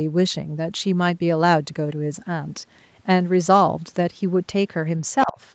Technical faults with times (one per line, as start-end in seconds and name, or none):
5.25-5.39 speech suppressed in double talk